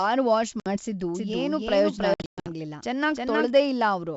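Speech carried over a G.722 wideband link, with clean bandwidth up to about 7 kHz that fits the 64 kbit/s mode, shows packet loss on an ADPCM call at 0.60 to 0.72 s and again at 2.14 to 2.47 s. The first is a hard-edged 60 ms gap, roughly a few packets. The second spreads about 260 ms of dropouts over 320 ms, with the longest run 120 ms, suggesting around fifteen lost packets. After each hole the decoder's predictor and step size disagree with the sender's, so the speech resumes slightly distorted before settling. From 1.15 to 3.49 s a doubled audio track is audible: a full-band copy at about the original level trails by around 300 ms, with no decay or room colour, and starts and stops abruptly. It is likely a second capture through a slower path.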